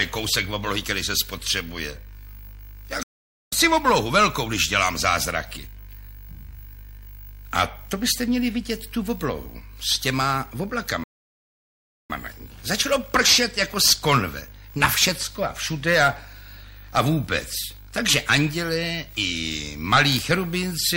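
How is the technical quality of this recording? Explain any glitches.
Two glitches stand out, both playback stalls. At 3.03 s the sound cuts out for about half a second until 3.53 s, then again from 11.04 s to 12.10 s for just over a second. The player likely ran dry of data or got blocked, so output went silent mid-flow before picking back up.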